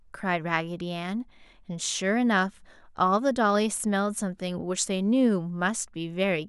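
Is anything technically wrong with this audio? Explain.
No, nothing is technically wrong with this audio.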